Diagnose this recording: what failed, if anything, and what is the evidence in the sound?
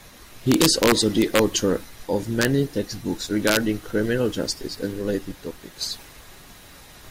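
Integer overflow in a fixed-point gain or mixing stage. Loud speech peaks crack violently at 0.52–1.39 s, 2.42–2.45 s and 3.47–3.57 s, just before "criminal justice and related". Pushed only about 1–2 dB over full scale, samples wrap to the opposite sign instead of being limited.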